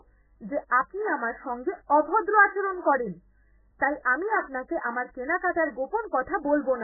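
From start to finish the speech is dull and watery. Nothing survives above 2 kHz, and what remains swirls as weak parts flicker in and out. That's likely heavy MP3 compression, with the encoder starved of bits, which fits a very low bitrate around 8 kbps.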